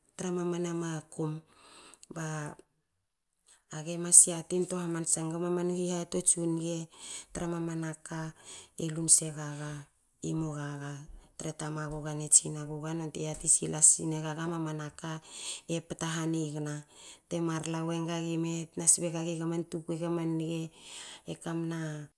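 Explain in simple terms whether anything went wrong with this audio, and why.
Nothing went wrong here: the speech recording comes across as technically sound, with no audible dropouts, distortion or other signal problems at any point.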